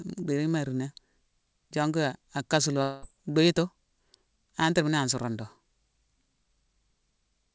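From 2.82 s to 3.04 s the speech breaks off and the last sound is stretched into a fading buzz that fills the whole gap, about 0.2 s, with no true silence. When the speech resumes, roughly 0.2 s of it is simply gone. This is most likely a long network dropout: packets stopped arriving and the receiver concealed the hole. The call path itself shows nothing above 8 kHz, which fits a wideband call codec such as G.722.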